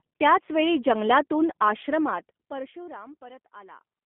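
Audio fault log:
throughout G.729 codec: speech rebuilt from a low-rate vocal tract and pitch model, which fits 8 kbit/s, is confined to 200 Hz to 3.5 kHz and sounds plainly rough and synthetic.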